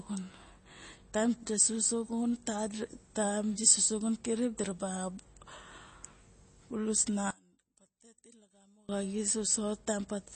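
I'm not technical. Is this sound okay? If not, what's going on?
No. Throughout the speech there is plainly audible damage of the kind MP3 compression leaves, which is the likely cause. To save space, the encoder threw away sound details it judged less important, so some details flicker in and out, giving a watery, swirly quality, and everything above 8.3 kHz is cut off. That removes the crisp top end, so s sounds and sharp starts of sounds lose their clarity.

From 7.31 to 8.89 s, just after "bulus na", the sound drops away to a much quieter leftover, then returns. This is one channel inverted. The recording likely had two channels, one of them flipped upside down. When the two were combined into one, the parts they shared cancelled each other out, so almost everything disappeared and only the small differences between the channels remain.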